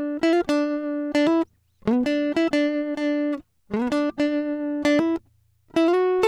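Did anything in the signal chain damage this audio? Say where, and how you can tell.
No, nothing audible in this music points to damage at any stage of the signal chain, from capture and conversion through to playback.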